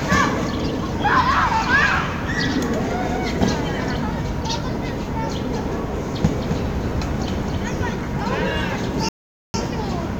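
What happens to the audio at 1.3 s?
At 1.3 s the everyday sound continues intact, with no dropout, click, distortion or other fault.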